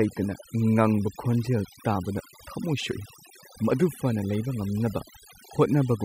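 Overdone noise removal affects the speech from start to finish. A noise reduction stage set far too aggressively is attenuating or removing individual frequency bands whenever their level sits close to its noise estimate, and the quieter components of the voice fall below that threshold along with the noise. The background collapses to near silence scattered with brief twinkling artefacts, while the voice loses its softer detail.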